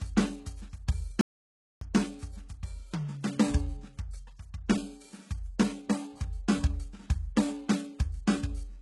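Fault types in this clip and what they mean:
HE-AAC compression: The treble sounds gritty and metallic, its harmonics not lining up with the music below, and nothing reaches above 11.5 kHz. The likely cause is heavy HE-AAC coding that rebuilds the top band from copied lower bands, which fits a bitrate near 12 kbps.
audio dropout to silence: The music cuts out at 1.21 s and resumes mid-flow at 1.81 s, leaving about 0.6 s of complete silence with no background left. The likely cause is a lost input while the recording kept writing silence, so that stretch of music is gone.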